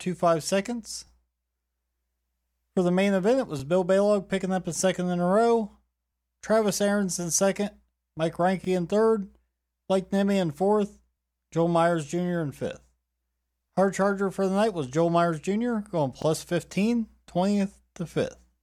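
A brief stutter, heard almost as a click, recurs every 2.5 s: at 1.07–1.10, 3.60–3.62, 6.12–6.15, 8.65–8.67, 11.17–11.20, 13.70–13.72 and 16.22–16.25 s. These are overlapping chunks. Each 2.5 s chunk begins 25 ms before the previous one ends, so that 25 ms slice repeats at every join.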